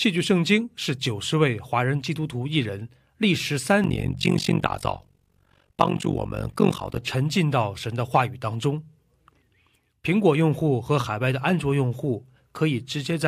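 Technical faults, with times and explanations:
3.84 to 6.98 s, overlap-add ripple: the speech was split into windowed frames and rejoined with overlapping windows that fail to sum to a constant gain, so the level swings by about 60 dB every frame, around 50 times a second, giving a harsh, robotic flutter.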